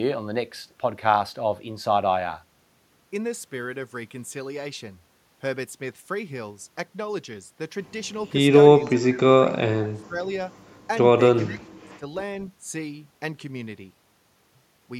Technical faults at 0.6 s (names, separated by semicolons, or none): none